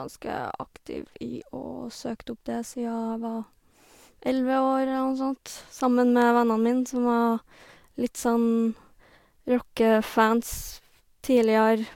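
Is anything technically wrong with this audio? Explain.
No, the speech signal comes through with no audible technical faults at any point.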